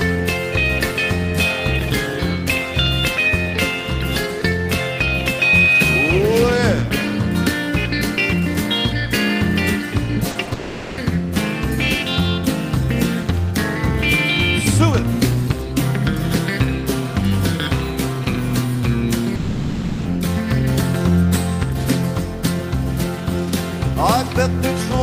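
The audio has a cluster of short concealed packet loss right around 10.3 seconds: a 40 ms gap at 10.31 to 10.37, then two back-to-back 20 ms gaps at 10.45 to 10.49 and 10.49 to 10.53. Each time the receiver patched over what never showed up by carrying the preceding sound forward and easing back into the real signal, so you get quick little smears or wobbles, and anything very brief in those spots can go missing.

That run leads straight into what sounds like a long network dropout from 10.53 to 10.99 s, and there's a second, longer one from 19.35 to 20.07 s. In both, the last sound gets stretched into a fading buzz or hiss that covers the whole 440 ms and 700 ms gaps rather than dropping to silence. When the audio comes back, the original material from those stretches is just gone, and the likely cause is packets not arriving at all for that long.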